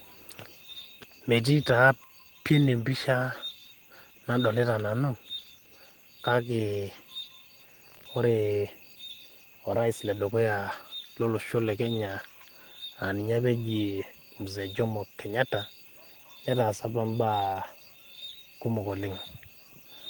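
From start to finish the speech carries Opus voice compression, and the damage is plainly audible. The coder works in hybrid mode. Linear prediction handles the range below 8 kHz, and a coarse transform layer covers the top. The band stays wide, reaching about 20.3 kHz. But the excitation is coded thinly. The voice sounds hoarse and faintly robotic. The artefacts fit a bitrate of about 16 kbps and 20 ms frames.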